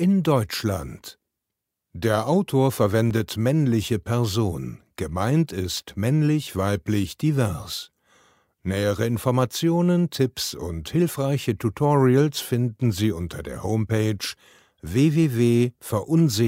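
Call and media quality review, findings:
Underrun with held sample at 3.10 s: output goes flat for 5 ms at a held level, then resumes as about 5 ms of live audio is skipped. Probable component: playback buffer running empty, converter holding its last value.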